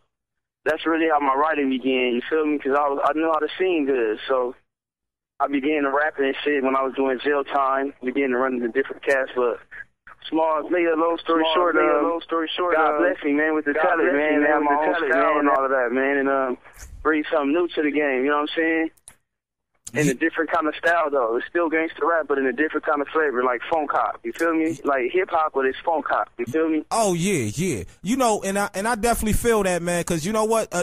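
A doubled audio track runs from 11.10 to 15.56 s: a full-band copy trails the original by about one second, a few decibels quieter, with no decay or room colour. It likely comes from a second capture path, and it starts and stops abruptly.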